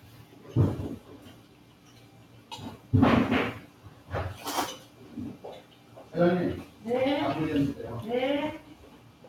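A noise suppressor applied to music or sounds runs through the whole clip. A processor tuned for speech treats sustained parts and ambience as noise, so the level swings by around 10 dB as it clamps and releases. Onsets punch through while held portions and tails sink, giving a pumping, thinned character. On a waveform the envelope breathes unevenly. On a spectrogram the steady bands and decay regions look patchy and hollowed between sharp attacks.

Sound cut by the noise suppressor appears at 1.34–2.51 s, 3.67–4.09 s, 4.85–5.01 s, 5.62–6.13 s and 8.69–9.26 s. In each stretch the suppressor misjudged the sustained sound as noise and pulled it down by up to about 5 dB beyond the general swing. The longest dip lasts roughly a second, and the shortest is a brief flicker. Each one is heard as a sudden sag or a truncated decay. The waveform shows the envelope caving in, and the spectrogram shows the band energy fading abruptly.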